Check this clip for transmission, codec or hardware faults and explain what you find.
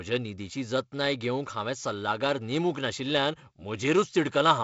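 The speech comes over a G.722 wideband telephone path that is working as intended at what sounds like 48 kbit/s, with the band ending near 7.7 kHz and only the light, slightly noisy texture that this coding rate leaves in the lower band.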